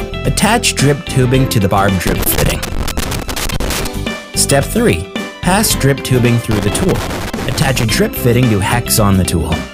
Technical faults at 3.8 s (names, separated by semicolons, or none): loose connector crackle